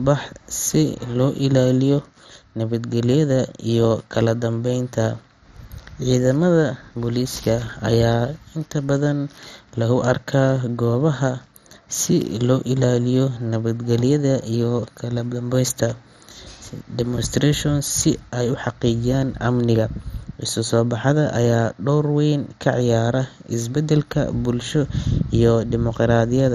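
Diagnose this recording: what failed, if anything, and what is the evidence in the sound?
The codec stage failed throughout the speech, which sounds dull and gurgling with granular roughness and nothing above 14.5 kHz. This is likely heavy MP2 compression, fitting a rate near 56 kbps. Starved upper sub-bands flicker off and the rest are coarsely quantised, so unlike a plain low-pass filter the damage keeps churning.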